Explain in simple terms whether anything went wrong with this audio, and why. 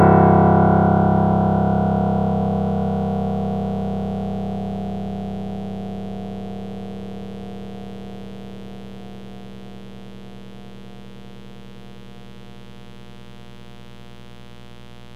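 Mains buzz runs through the whole clip, from the first second to the last: a steady, raspy hum sitting underneath the sound, though quieter than it. It comes from the 60 Hz electricity supply leaking into the recording, likely through something like a light dimmer, a power adapter or an unshielded cable. Sharp electrical spikes twice per power cycle add many higher overtones, which turn a low hum into a gritty buzz.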